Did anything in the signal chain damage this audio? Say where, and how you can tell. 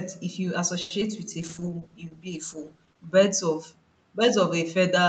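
Yes. At 0.81 s the network delivered a packet late, and the jitter buffer ran empty. The speech holds on one sound for 90 ms, with a slight buzz or dip, until 0.92 s. Then it resumes where it left off. This is a short stall from a late packet. Nothing is lost.

A short concealed packet loss follows at 1.00 to 1.03 s, also a network fault. About 40 ms of audio never arrived. The decoder patched only a brief stretch by extending the last sound, then skipped ahead. You hear a quick smear or wobble.

From 1.41 to 3.19 s there is a call bitrate drop at the codec stage. Opus was pushed from 64 kbps down to 13 kbps, and it sat at the bottom for 1.72 s. The speech turns coarse and watery, then clears as the bitrate recovers.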